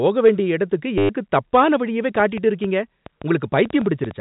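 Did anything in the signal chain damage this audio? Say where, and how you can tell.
Yes. Between 0.98 and 1.09 s the speech turns into a short robotic stutter with a buzzy edge. This is packet loss with the last packet repeated, a network fault. About 110 ms of audio went missing, and the receiver filled the gap by replaying the last packet it had. The repeats fit roughly 10 ms packets, so the run buzzes near 100 Hz.

From 2.16 s to 4.12 s there is a train of clicks: about ten sharp, similar ticks at an uneven pace of around 5.6 per second. They are heard over the speech and in the pauses, and they peak a little above the speech level. The likely cause is in the analogue wiring or the interface, from interference off nearby equipment or a faulty connection or power supply injecting pulses. The A-law telephone coding's 4 kHz band limit can be heard throughout, but it is not part of either fault.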